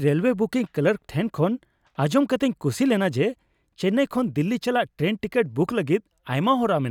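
No technical faults can be heard anywhere in the recording; the signal stays continuous and stable throughout.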